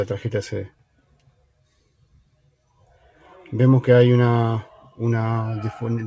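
From 0.98 to 1.66 s, 1.87 to 2.49 s and 2.8 to 3.22 s, sound is cut by the noise suppressor. It mistakes steady parts for noise. Those parts sink by about 12 dB in the first two spans and about 8 dB in the third.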